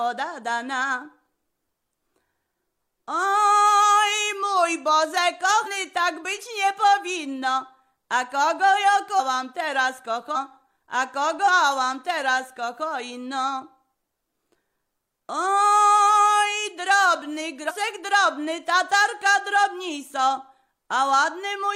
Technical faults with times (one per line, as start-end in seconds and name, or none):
5.62-5.68 compressed frames skipped
9.15-9.20 compressed frames skipped
10.31-10.37 compressed frames skipped
11.43-11.48 compressed frames skipped
17.65-17.72 compressed frames skipped